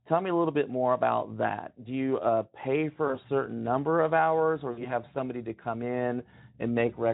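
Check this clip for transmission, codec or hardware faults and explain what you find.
Two dropouts from VoIP packet loss concealed by the speech codec, at 3.07 to 3.19 s after "you uh pay" and at 4.71 to 4.86 s after "number of hours or". The first gap fits one lost 20 ms frame and the second about three, roughly 60 ms. Each time the decoder held its last pitch and filter, fading the gain and stretching the sound into a brief buzzy tone or coloured noise that stays weak until recovery, before "certain number of hours" and "have somebody to come". The Speex coding leaves only light coding damage elsewhere.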